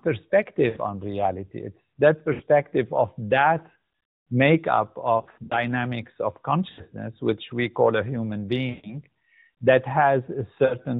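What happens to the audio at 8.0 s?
At 8.0 s the speech is intact, with no dropout, click or distortion, only the band-limited, telephone-like sound of the AMR narrowband mobile codec, which cuts everything above 4 kHz.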